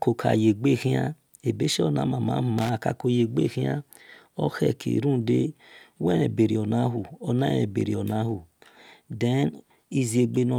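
A short, irregular burst of crackle and scratching cuts through the speech from 2.58 to 2.69 s, lasting about a tenth of a second, with the signal sounding chopped as it breaks up. This is loose connector crackle: a worn or dirty contact somewhere in the cable or jack path was shifting, so the connection repeatedly made and broke, interrupting the audio.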